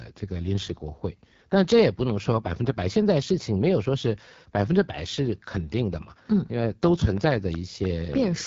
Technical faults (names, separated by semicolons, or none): AMR wideband (HD Voice) codec; train of clicks